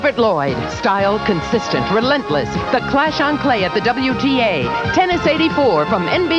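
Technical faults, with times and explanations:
No technical faults are audible anywhere in the recording.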